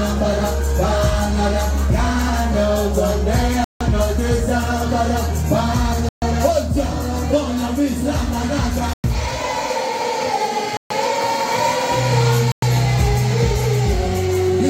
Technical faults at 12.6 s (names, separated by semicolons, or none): Bluetooth stall